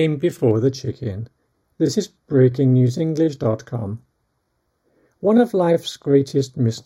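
From 0.51 s to the end, channel delay (comb filtering) sets in: one channel lags the other by a fraction of a millisecond, so the mono sum cancels at evenly spaced frequencies, the first near 3 kHz. The sound turns hollow and phasey, and unlike flanging the notches stay fixed.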